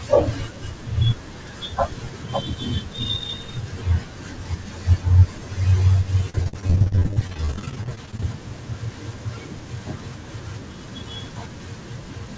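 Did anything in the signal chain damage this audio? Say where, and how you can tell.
Yes. The network stage repeatedly lost or delayed packets from 6.30 to 8.23 s. The receiver patched each hole by extending the previous sound, so this speech turns choppy and robotic, with dozens of dropouts up to 43 ms long and about a third of the stretch concealed.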